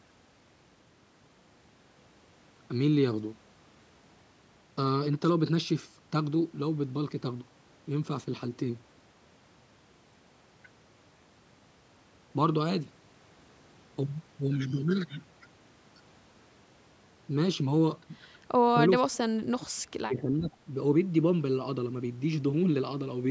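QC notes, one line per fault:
18.66 to 18.75 s and 19.01 to 20.53 s, speech suppressed in double talk: The speech level sinks twice. The first dip is brief, about a tenth of a second and roughly 10 dB down. The second lasts about one and a half seconds and falls as deep as roughly 35 dB, so the speech nearly vanishes. The likely cause is an echo canceller that heard both ends talking together. It could not tell this talker from loudspeaker echo, so it turned the talker down as well.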